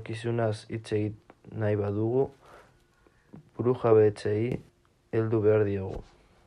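A gain setting in the speech chain was likely applied without any ramp, stepping the level up by about 8 dB from one sample to the next at 4.52 s and holding it until 4.69 s. This sudden gain jump lifts the voice and background noise together, so both leap abruptly louder for that short stretch.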